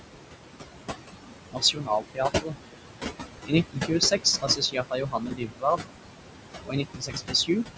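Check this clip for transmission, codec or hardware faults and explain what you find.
There are two related faults here, both from the noise suppressor, so nothing in the transmission or hardware side stands out beyond that.

Noise suppressor artifacts run through the whole clip. The room noise sits only about 5 dB under the speech, and the suppressor pulls its steady parts down by about 21 dB, deciding band by band and frame by frame. That's heavy work against noise that strong, so the background dips in the gaps and swells back under the speech.

Speech cut by the noise suppressor shows up three times: 1.51 to 2.56 s, 3.45 to 5.87 s, and 6.63 to 7.77 s. Because the speech barely clears the noise, the suppressor mistakes some of it for background and turns those bits down by up to about 21 dB, the same depth it uses on the noise. It adds up to something like 0.7 s, 1.5 s and 0.7 s of affected sound in those stretches. 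Softer consonants and word endings come out swallowed or faint. Nothing above 8 kHz comes through, which is just the call's band limit and fits a 16 kHz sample rate.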